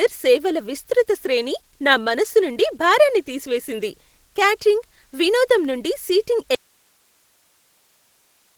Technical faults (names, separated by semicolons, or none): Opus voice compression; audio dropout to a faint residue